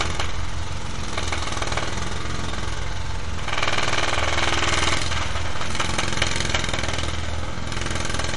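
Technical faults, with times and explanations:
Throughout, DC offset: the whole waveform sits shifted away from the zero line by a constant amount. It can't be heard as a sound of its own, but it shows up as steady energy at the very bottom of the spectrum, at zero frequency, and it eats into headroom, so peaks on one side of the waveform reach full scale sooner than those on the other. Removing it takes a simple high-pass filter or mean subtraction.
Throughout, MP3 compression: the sound has a plainly audible watery, swirling quality, with nothing above 11.2 kHz. That hard treble ceiling and the shimmer are likely the work of an MP3 encoder starved of bits, around 48 kbps. With so little data to spend, it discards the top band entirely and zeroes the weaker frequency lines, and these flicker on and off from frame to frame, which produces the swirl.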